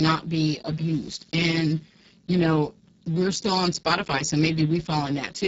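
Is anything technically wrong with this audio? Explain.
Yes. Speex codec damage runs through the whole speech clip. The sound points to a very low rate, near 6 kbps, which leaves this CELP coder too few bits for the excitation, so the speech turns heavily hoarse and noisy, with nothing above 7.7 kHz.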